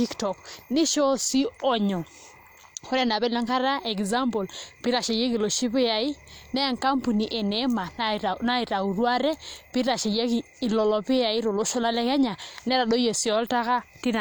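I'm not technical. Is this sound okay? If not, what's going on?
Yes, nothing stood out as a problem when listening to this recording.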